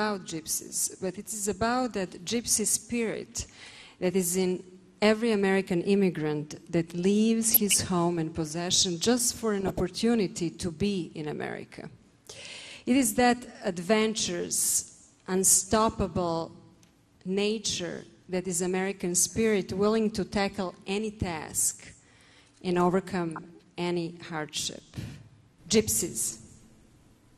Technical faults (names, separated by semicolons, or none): MP2 compression; DAB burbling